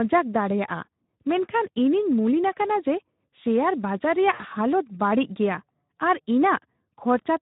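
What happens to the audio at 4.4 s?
Right after "ᱥᱮᱭᱟᱨ ᱵᱟᱡᱟᱨ", from 4.33 to 4.44 s, the speech smears into a buzzy tone or coloured noise that fades, and stays weak briefly. This is VoIP packet loss concealed by the speech codec: about 60 ms went missing, which fits three 20 ms frames. The decoder filled the gap by repeating its last pitch and filter at falling gain. Underneath, the Speex codec at 11 kbps adds a plainly audible hoarse, noisy grain, because it has too few bits to rebuild the excitation cleanly.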